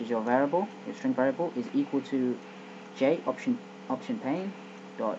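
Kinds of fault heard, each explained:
No audible faults identified in the clip.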